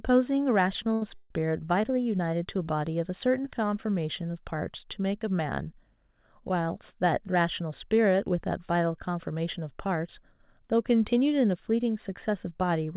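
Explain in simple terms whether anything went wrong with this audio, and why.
From 0.84 to 1.31 s there are repeated stalls (stutter). Sound arrived late four times, so the receiver stretched what it had, and the audio drags.

From 7.08 to 8.51 s a jitter buffer speed-up happens. Tiny slices were cut, about a tenth of a second in total, so the talking runs about 6% faster.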